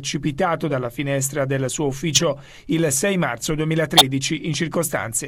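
Two brief, loud chirps of stray noise cut in, at 2.15 to 2.22 s and 3.97 to 4.05 s, each peaking near -5 dBFS. Each is a corrupt frame decoded: bit errors in roughly three compressed frames were played anyway, throwing energy into wrong frequencies.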